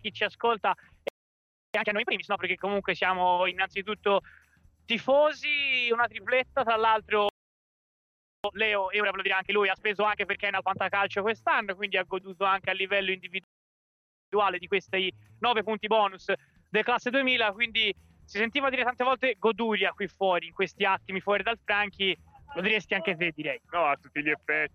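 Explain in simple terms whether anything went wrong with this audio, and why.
The player three times ran short of data or got held up, most likely by a late delivery, and produced a playback stall: the sound simply stops, from 1.08 to 1.74 s (0.66 s), 7.29 to 8.44 s (1.15 s) and 13.44 to 14.32 s (0.89 s), then resumes.

After each gap the player rushed to make up lost time with time-compressed catch-up, trimming tiny slices and blending them together. The sound is hurried but keeps its normal pitch: twice normal speed at 1.74 to 2.38 s, 1.5 times at 8.44 to 10.74 s, and 1.25 times at 14.32 to 17.32 s.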